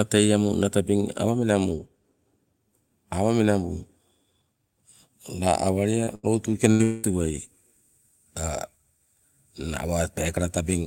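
Packets carrying this speech were lost or arrived too late in four places, all between about 6.0 and 7.1 seconds. First, a short concealed packet loss at 6.03 to 6.10 s: about 40 ms of audio never reached the decoder, so the receiver extended the preceding sound for roughly 36 ms and blended back into the real signal. The result is a brief smear or wobble rather than a clean gap.

Shortly after, at 6.15 to 6.26 s, a burst of packet loss removed about 80 ms in a row. The receiver again continued the last sound, for about 82 ms, and turned it down as the gap went on. This is heard as a held buzz or fading hiss, after which the speech picks up further along with the middle missing.

A second burst of packet loss at 6.71 to 6.82 s behaves the same way, with about 80 ms lost and around 82 ms of fading continuation before the real audio returns.

Almost immediately, from 6.83 to 7.06 s, a longer stretch of about 200 ms is replaced by a continuation of the last sound that fades over roughly 196 ms without dropping to silence. 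The speech then resumes with that portion gone. This is likely a long network dropout, following so closely on the second burst that together they form one sustained disruption of about a third of a second.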